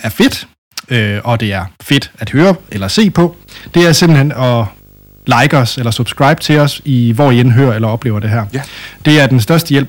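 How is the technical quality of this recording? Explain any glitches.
The recording has hard clipping from start to finish. The speech is driven about 9 dB past what the signal chain can carry, so each louder syllable has its peaks sliced flat. Only a small share of the waveform, a few percent, is over the limit, but those flat tops add harmonics high in the spectrum, giving a harsh, crackly fuzz on every stressed sound. Soft saturation would sound rounder and warmer. This edge is abrupt and gritty, and it shows up only on the peaks.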